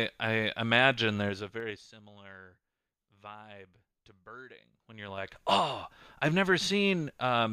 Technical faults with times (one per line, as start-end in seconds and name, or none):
1.24-2.00 zipper noise
4.76-5.44 zipper noise